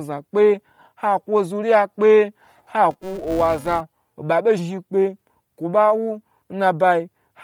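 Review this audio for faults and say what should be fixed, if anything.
Throughout the speech there is a breathy, grainy edge on the upper frequencies. The damage is heavy, and Bluetooth LC3 compression is the likely cause. At a low bitrate, perhaps around 32 kbps, the codec drops much of the high spectrum in each frame and fills the gaps with noise. The granularity fits 10 ms frames. On a spectrogram the upper bands look patchy and speckled rather than following the harmonic structure. To prevent it, send the audio at a higher LC3 bitrate or over a wired or higher-quality link.

From 2.91 to 3.81 s a buzz at 375 Hz sits under the speech and rises and falls with its level. This is a filter restarted on every block. The filter loses its memory between blocks and starts each one from zero, so every block opens with a small transient. The 375 Hz repetition rate fits a 128-sample block. On the waveform, evenly spaced small spikes mark each block boundary, and on a spectrogram they show as thin vertical lines with a harmonic comb based at 375 Hz. 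To prevent it, carry the filter state over from one block to the next instead of resetting it.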